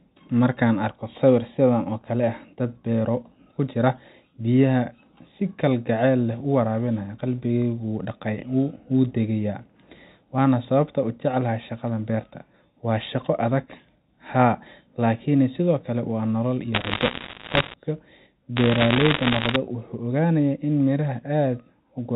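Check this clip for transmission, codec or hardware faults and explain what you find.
Bit errors on a digital phone line show up as two crackle bursts over the speech.

Bit errors on a digital phone line occur at 16.74–17.74 s and 18.57–19.56 s. Each flipped bit corrupts one sample of the logarithmic telephone coding. Hits on sign or high bits cause sharp ticks. The first burst, at roughly 2 percent errors, crackles more densely than the second.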